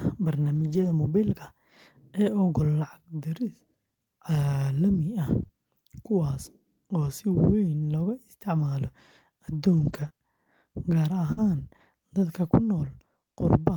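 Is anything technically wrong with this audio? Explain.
Yes. The speech has three kinds of transmission fault, all from packets that did not arrive.

Lost packets rebuilt from error correction occur at 0.55 to 0.91 s, 5.43 to 5.45 s, 9.73 to 10.07 s and 11.37 to 11.39 s. The longer stretches rebuild about 180 ms each, which points to several separate lost packets. The shorter ones cover 20 ms. Each missing packet was replaced by the low-bitrate copy carried in the following packet, so there is no gap, but those frames sound rougher and noisier. On a spectrogram the stretches look grainier, while the waveform stays continuous.

Short concealed packet loss follows at 5.47 to 5.51 s and 10.09 to 10.12 s. About 20 ms of audio is missing each time. The receiver filled the hole by extending the preceding sound and then blended back into the real signal. It is heard as a brief smear or wobble. 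A spectrogram shows a short patch of repeated or smoothed harmonics.

A burst of packet loss sits at 11.32 to 11.39 s, where about 40 ms of audio is missing and 47 ms was synthesised. The decoder continued the last sound while turning it down, so it becomes a held buzz or fading hiss before the speech resumes further on. Its final 20 ms overlaps the error-correction repair at 11.37 s. On a waveform the envelope sags. On a spectrogram the harmonics freeze, then dim.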